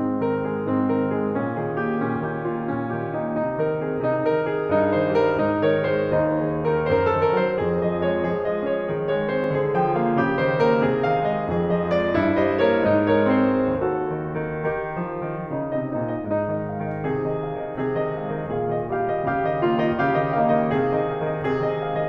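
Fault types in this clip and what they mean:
Block of digital silence: a short run of samples in the music drops to silence and then returns, with no fade on either side, so the waveform jumps abruptly at both edges. Here it happens once, at 9.44 s, and lasts 0.73 ms, which fits a 32-sample block. A gap that short is too brief to register as a hole in the sound. Instead, the two hard edges are heard as a tick or dip.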